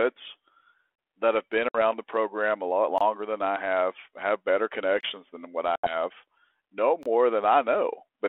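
At 0.96 s a 25 ms silent hole with hard edges cuts in. This is a gap between chunks. The same gap recurs at 2.98, 5.01 and 7.03 s, every 2 s, and each one falls at a join between chunks.

At 1.69 s, after "that have been", comes packet loss on an ADPCM call. About 60 ms of sound drops out, which fits a few lost packets. The decoder's predictor then drifts, so "the program a lot" re-enters slightly distorted.

At 5.76 s, after "than what", a similar loss removes about 80 ms. Disturbed sound persists until about 5.95 s as the adaptive state recovers.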